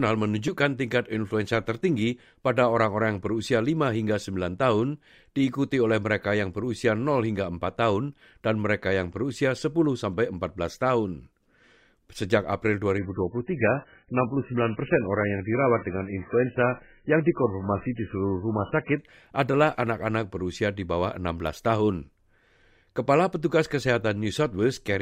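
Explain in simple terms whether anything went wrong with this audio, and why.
Something did go wrong: from 12.98 s to 18.98 s the speech turns muffled and artificial, with nothing left above about 3 kHz. That is an adaptive stream at a lower bitrate, where a slowed connection switched playback to a heavily compressed version without any gap.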